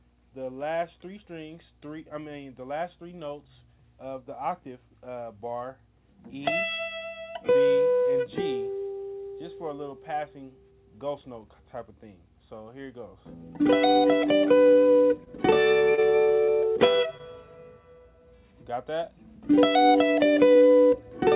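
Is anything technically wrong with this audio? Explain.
Yes, four brief transport glitches fall between 15.2 and 17.2 s, over a call path whose G.711 mu-law coding leaves nothing above 4 kHz.

Short stalls from a late packet occur at 15.24 to 15.29 s and 17.18 to 17.22 s. The jitter buffer ran dry, so the last sound was held about 24 ms and then 16 ms before continuing, with nothing lost. On a spectrogram each appears as a briefly frozen, smeared column.

Short concealed packet loss occurs at 15.94 to 16.01 s. About 40 ms never arrived and was replaced by 30 ms of extrapolated sound. It is heard as a quick smear or wobble.

A burst of packet loss occurs at 16.43 to 16.51 s. About 40 ms is missing, patched with roughly 49 ms of decaying continuation. This produces a fading held buzz or hiss, and the waveform envelope shrinks before the audio resumes further on.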